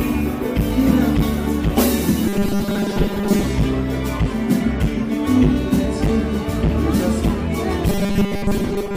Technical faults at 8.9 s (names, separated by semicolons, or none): robotic sound from repeated short buffers